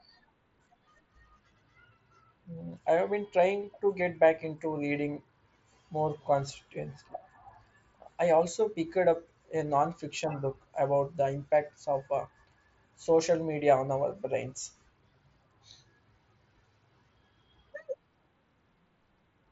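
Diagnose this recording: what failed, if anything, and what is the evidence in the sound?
Nothing in this recording has failed at any stage of the chain. The speech carries the signature of a Bluetooth mSBC headset codec link working as designed, with nothing above 7.7 kHz and only the light graininess that codec leaves on the sound.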